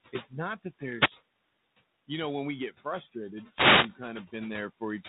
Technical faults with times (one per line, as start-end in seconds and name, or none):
0.00-5.08 noise suppressor artifacts